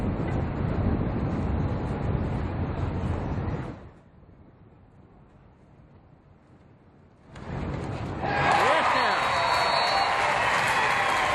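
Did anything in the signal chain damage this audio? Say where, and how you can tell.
Yes. Between 3.60 and 4.03 s there is zipper noise: a fall of roughly 25 dB applied in 1 dB steps, around 100 per second, each step ticking audibly. That rate points to gain updated once per buffer of about 10 ms without smoothing.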